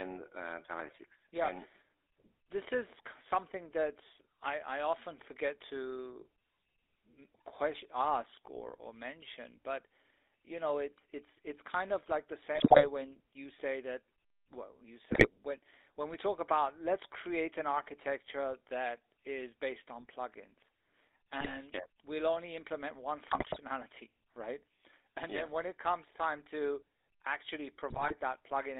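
Speech carried over the GSM full-rate codec, which rebuilds the voice from a vocal-tract filter driven by sparse, regularly spaced pulses. The band runs only from 300 Hz to 3.7 kHz, and a plainly audible buzzy, gravelly roughness sits on the voice throughout, which fits 13 kbit/s GSM. GSM bit errors corrupt the decoder's filter, pitch and gain values at 12.54–12.86, 15.12–15.29, 21.40–21.61, 23.28–23.58 and 27.90–28.13 s, so those stretches break into squawks, pops and gargling, with the spectrum bending and the level jumping frame by frame.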